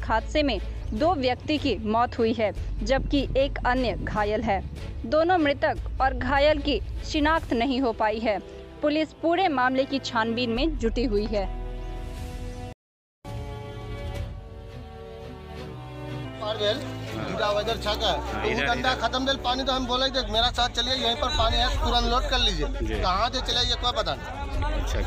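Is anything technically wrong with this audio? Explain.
Yes. At 12.73 s the player most likely ran dry of data or had its output thread blocked, a playback stall, so the output drops to silence for about 0.52 s, until 13.25 s. The sound simply stops in mid-flow and then resumes, leaving an obvious gap in the continuity rather than a click or a fade.

From 13.25 s to 16.25 s the player works off the backlog built up during that gap, a catch-up at higher speed. It resamples the buffered audio to run at 1.15 times normal rate, which raises speed and pitch together, by roughly two semitones. For those three seconds everything sounds hurried and slightly chipmunk-like, then it drops back to normal speed and pitch once most of the lost time is recovered.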